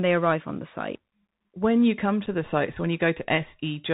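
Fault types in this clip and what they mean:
Bluetooth CVSD headset codec: narrow, scratchy speech with granular hiss and harsh s sounds, nothing above 4 kHz, from one-bit delta coding at 64 kbps.
Unconcealed Bluetooth headset packet loss: a brief abrupt hole of about 7.5 ms after "you come", where a couple of lost voice packets were replaced by silence or an idle pattern.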